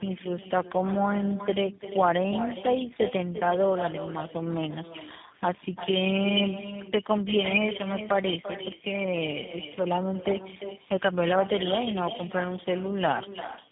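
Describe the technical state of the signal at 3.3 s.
At 3.3 s, as throughout, echo with no canceller returns every syllable about a third of a second later, about 11 dB down. It is a discrete, thinner repeat rather than smeared room reverberation. Tandem speech coding is also present: nothing reaches above 3.8 kHz, and the roughness and warble sound like several speech coders in series, likely four, not one narrowband link.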